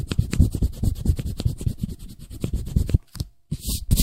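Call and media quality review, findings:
Clock drift between sender and receiver, whole clip. Sender clock running fast, roughly 4 percent. Jitter buffer keeps overfilling, so the receiver must discard material to hold latency. Audible as small, unevenly spaced timing hiccups in the sound throughout.

Repeated timing corrections, 0.49 to 3.86 s. Receiver-side jitter buffer trimming short pieces to keep pace with the fast sender, effective playout rate 104 percent. Edits all in one direction, irregular spacing.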